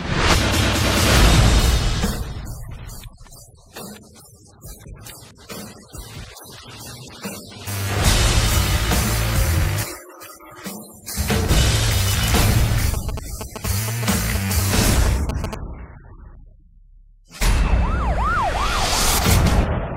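From 12.94 to 15.55 s, GSM signalling bursts: a nearby 2G phone's radio pulses, rectified by the circuit, give galloping 217 Hz buzzing ticks, seen as regularly spaced vertical stripes, about 10 dB below the sound.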